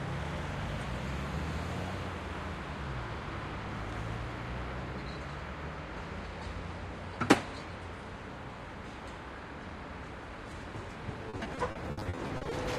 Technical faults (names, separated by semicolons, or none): repeated packet loss (robotic sound)